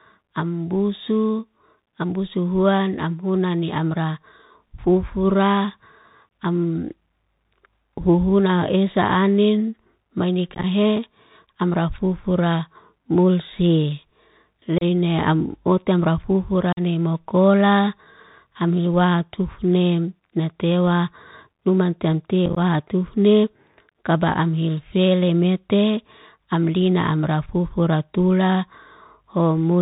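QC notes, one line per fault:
Throughout: Bluetooth CVSD headset codec. The link carries the speech as one up-or-down bit per sample at 64 kbps with an adapting step, which leaves nothing above 4 kHz. Speech sounds narrowband, phone-like and dull. Loud high-frequency sounds outrun the step and distort, s sounds come out scratchy, and a granular hiss sits underneath throughout.
6.29 to 6.31 s, 10.55 to 10.65 s, 14.78 to 14.84 s, 16.73 to 16.80 s and 22.46 to 22.58 s: unconcealed Bluetooth headset packet loss. Short voice packets between headset and phone went missing and were filled with silence or an idle pattern, so the speech has abrupt holes and then returns briefly quieter. The losses total about 22.5 ms at 6.29 s and 30 ms at 14.78 s. At 16.73 s, just before "ni mokola", 45 ms are lost. The runs right after "esa anin mai" and before "tufni kaba'am" each lose 45 ms, scattered in pieces of up to 15 ms across roughly 90 and 105 ms, which makes those two sound crackly and chopped rather than like one gap.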